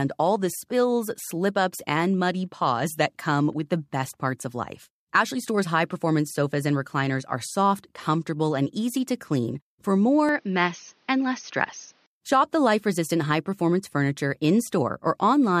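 Input switched to a poorer device, from 10.29 to 12.06 s. The speech suddenly turns duller and boxier, with nothing above 6.5 kHz, and a faint new background noise sits well beneath it, while the loudness stays about the same. There is no gap at the change. The likely cause is the recording input jumping to a lesser microphone or headset profile with a narrower band and its own coloration, then returning to the original input at 12.06 s.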